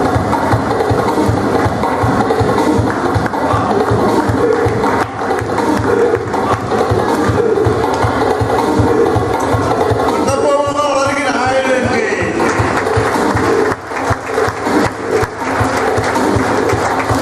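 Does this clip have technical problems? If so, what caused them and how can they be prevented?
Yes, there are scattered short gaps between 10.56 and 11.57 s. About seven tiny holes, none over roughly 15 ms, appear where packets went missing or arrived late, and the receiver stretched the previous sound, leaving brief ticks and smears. A steadier network or larger jitter buffer would prevent it.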